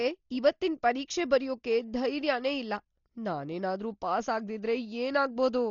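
Speech with heavy Dolby Digital compression throughout: nothing above 7 kHz, and rough, dithered flutter around tones, unlike MP3 swirl, likely from a very low bitrate near 32 kbps.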